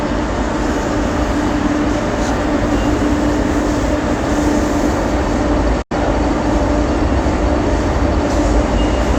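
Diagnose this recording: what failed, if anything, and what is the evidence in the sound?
A digital broadcast dropout runs from 5.82 to 5.95 s. At the reception and decoding stage, the sound fades out over about 8 ms into a short silent hole, and what was sent then is gone. The missing stretch fits two corrupted frames of about 43 ms each, muted until clean frames arrived.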